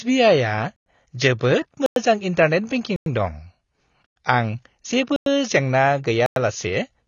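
Speech, and the whole thing sounds dull and smeary, with nothing above 7 kHz and a fizzy edge on sibilants, which is likely AAC compression at something like 24 kbps. There's also a gap between chunks: 100 ms silences at 0.76, 1.86, 2.96, 4.06, 5.16 and 6.26 s, one after each 1 s chunk.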